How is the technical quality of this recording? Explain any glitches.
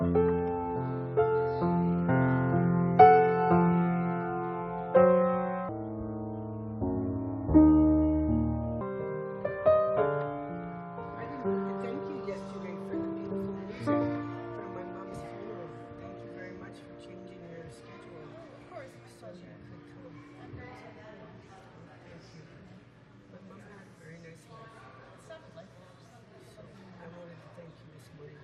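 The recording has one clear glitch. From 5.69 to 8.81 s, a section at the wrong speed plays at 0.59 times normal rate, likely because that stretch was clocked wrongly on playback or in editing. The sound drags and drops nearly ten semitones. Unlike a pitch shift, timing and pitch sink together and then snap back.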